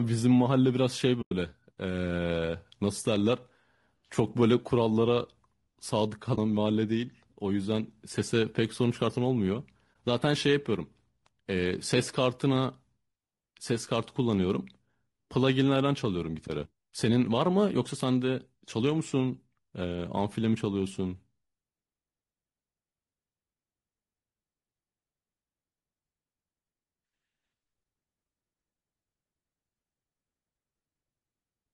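All the way through, the speech has a rough, grainy quality, with noise filling the gaps between harmonics and a thin, synthetic top end. That's likely low-delay AAC compression, AAC-ELD, and the damage fits a bitrate around 32 kbps.

There's AAC frame loss with muting at 1.21 to 1.32 s, a roughly 100 ms hole that fits about five lost frames, then shorter dropouts at 6.35 to 6.38 s and 9.93 to 9.95 s. The decoder zeroed the missing spectrum, so the sound fades out and back in softly.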